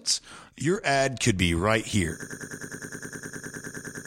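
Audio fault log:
2.22–4.07 s broken-record loop: just after "could be right here", a 103 ms fragment stutters back to back, repeating identically 18 times until the clip ends. The audio that should follow never plays, likely because the stream stalled and kept resending its last held fragment.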